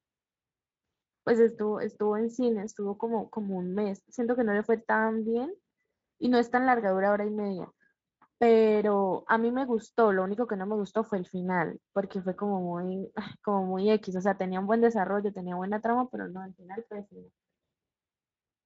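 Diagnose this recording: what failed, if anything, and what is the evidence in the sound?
Nothing failed; no stage shows a fault here.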